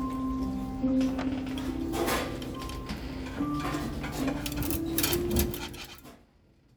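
Everyday sound recording with no technical faults detected.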